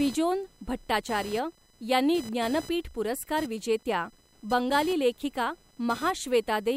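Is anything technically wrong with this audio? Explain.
Yes. Computer activity noise runs throughout the speech: processor or peripheral load shifts the shared audio ground, adding a buzzy chirping near 1 kHz, roughly 20 dB below the speech.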